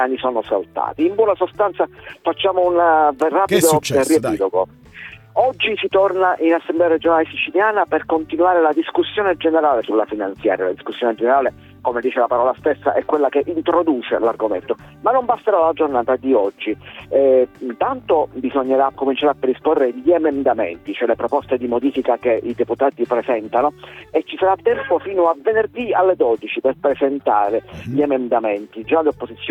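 No technical faults can be heard anywhere in the recording; the signal stays continuous and steady throughout.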